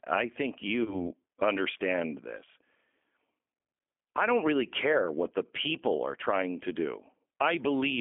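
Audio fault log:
throughout G.729 codec: the whole recording is carried at 8 kbit/s by a codec that does not send the waveform itself. It sends a vocal tract filter, a pitch predictor and a few pulses per 10 ms frame, and the decoder resynthesises speech from those. The line only passes about 250 Hz to 3.4 kHz, so the sound is thin and narrow. The coarse pulse excitation gives a plainly audible rough, slightly synthetic edge throughout.
0.84–0.97 s VoIP packet loss concealed by the speech codec: just after "I think", a gap of about 20 ms, which points to a single lost packet, is filled by the decoder. It extends its last pitch and filter settings and lowers the gain, so the gap comes out as a brief stretched, fading sound rather than silence. Each frame depends on the one before, so the sound stays weak or distorted for a while after, until "understand this".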